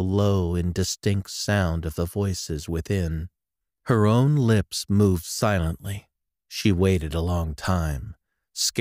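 No technical faults are audible anywhere in the recording.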